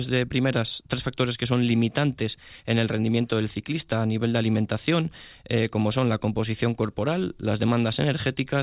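No technical faults can be heard in this audio.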